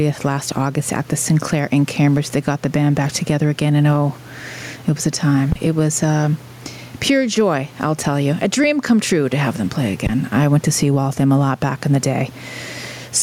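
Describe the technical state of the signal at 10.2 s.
At 10.2 s the signal is at the tail of a phantom power thump running from about 10.07 to 10.20 s, between "to have them play" and "I went to see". A supply switched on or off on the live input sends a voltage step through the coupling capacitors, heard as a deep low-frequency thump decaying over about 30 ms. A plosive or handling bump would instead follow the talker's breath or movement.

Gain pumping also runs through this moment. The gain swings by around 10 dB, likely from gain set far too high with a fast limiter clamping each peak, while the room noise sits about 36 dB below the speech. Unlike a noise gate, which cuts the gaps, this lifts them, leaving the level squashed.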